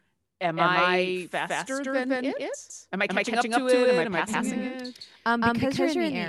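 From the start to the end of the speech, a doubled audio track is present. A second copy of the same audio trails the first by roughly 150 ms. It is about as loud as the original. The copy is full-band and dry, with no decay or room colour, so it sounds like a hard slapback rather than reverb. Every syllable lands twice. The likely cause is the signal being captured again through a slower path and mixed back in.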